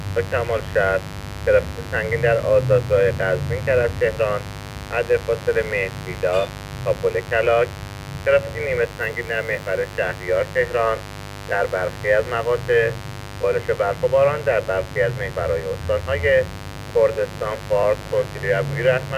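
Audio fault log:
Throughout: mains buzz, a steady raspy buzz sitting roughly 15 dB below the signal, built on 50 Hz. Sharp switching spikes twice per cycle spread harmonics up to several kHz, drawn on a spectrogram as evenly spaced horizontal lines 50 Hz apart.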